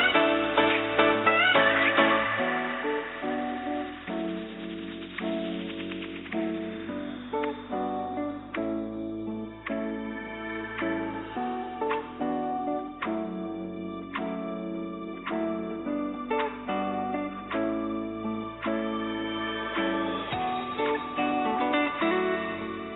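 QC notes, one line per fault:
No fault to note.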